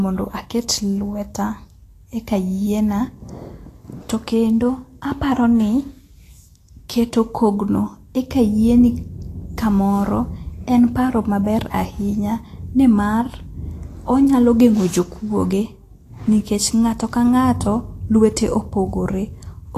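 From start to finish, the treble sounds hissy and grainy. Nothing reaches above about 14.2 kHz, so the top of the spectrum is simply missing. The highest band that remains has lost its fine detail. In its place is a rough noise of similar loudness. The speech sounds roughened, and consonant onsets are smeared. The likely cause is Vorbis compression at a low quality setting. The damage fits a bitrate around 36 kbps.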